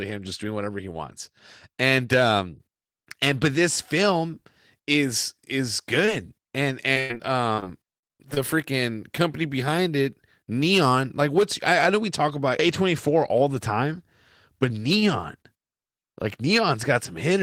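Just after "this film is is", at 6.05 s and again at 6.49 s, comes short concealed packet loss. About 20 ms of audio failed to arrive each time and was filled by extending the preceding sound. Each is heard as a brief smear, and on a spectrogram it shows as a tiny smoothed patch where harmonics stretch flat.

From 6.93 to 8.38 s, ending just before "freaking company behind it", repeated packet loss (robotic sound) sets in. About ten holes, the longest 97 ms and together about a quarter of the span, are each patched in turn, giving choppy sound with pieces missing. The waveform shows repeated dips and the spectrogram shows blurred, flattened harmonics.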